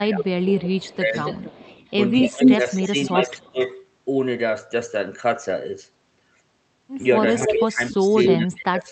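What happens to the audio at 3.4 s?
At 3.4 s an echo leak is running, from 0.55 to 3.77 s. A copy of the speech returns about 278 ms late, about 5 dB quieter than the direct sound. The likely cause is a loudspeaker echo that the far end's canceller failed to remove.

The same moment also falls within speech suppressed in double talk, from 2.3 to 3.58 s. The speech dips in pieces, dropping by around 20 dB at its deepest, for roughly a second in total. This is likely the echo canceller turning down the talker while overlapping sound plays back.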